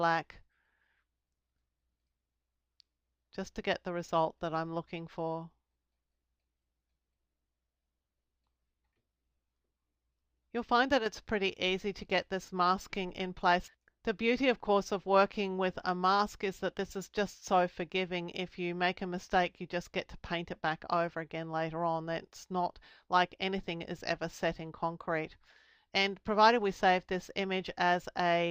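A likely one channel drop out occurs from 10.99 to 11.06 s: one side of the stereo pair appears to have stopped delivering signal for about 70 ms before recovering. Because the audio is heard as a mono sum, everything shared between the two channels abruptly falls by about 6 dB for that brief span, and any material carried only on the lost side vanishes. The result is a short, sudden dip in level that snaps back to full level.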